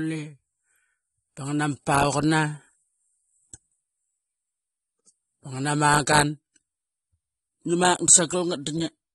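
From start to finish the speech sounds dull and smeared, with a warbling, fizzy texture on sibilants and nothing above about 11.8 kHz. This is likely AAC compression, AAC-LC starved of bits, which fits a bitrate near 32 kbps.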